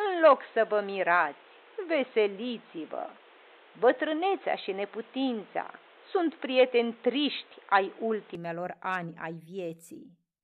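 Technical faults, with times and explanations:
0.00–8.35 s, input switched to a poorer device: speech is dull and boxy, likely from a narrower-band microphone or headset profile, then clears with no gap before "ani ai". The spectrogram shows a hard ceiling at 4.1 kHz; the waveform shows a level step of about 5 dB and a noise floor about 30 dB down.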